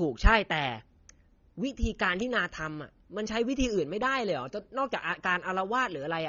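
From the first moment to the last, the speech sounds dull and smeared, with a fizzy, warbling edge on sibilants and held vowels that never lets up. That's the signature of AAC compression, most likely AAC-LC squeezed hard enough to fit something like 24 kbps. At that rate the encoder drops the top of the spectrum and leaves gaps or fills them with substitute noise, which is why the highs feel muffled yet oddly swirly.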